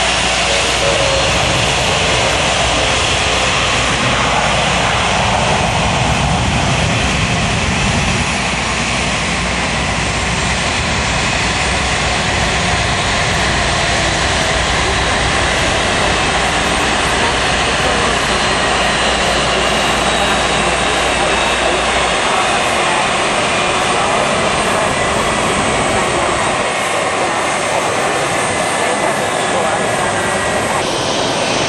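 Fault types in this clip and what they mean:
Mains hum: A steady, low drone sits under the sound from the very start until about 22.18 s, where it stops. It is pitched at 60 Hz with some low harmonics above it and is quite prominent, only around 15 dB below the wanted signal. The cause is power-line energy leaking into the signal path, typically through a ground loop between connected equipment or from a nearby transformer's magnetic field.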